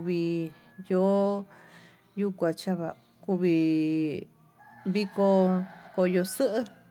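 No technical faults can be heard anywhere in the recording; the signal stays continuous and stable throughout.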